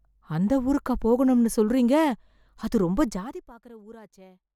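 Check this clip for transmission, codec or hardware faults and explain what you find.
One fault is present: zipper noise, from 3.07 to 3.49 s. The speech drops roughly 25 dB in coarse, unsmoothed steps, about a hundred a second, each leaving a tiny click, so a fine zipping buzz rides the fade. The waveform envelope descends as a staircase, and a spectrogram shows faint, evenly spaced vertical lines.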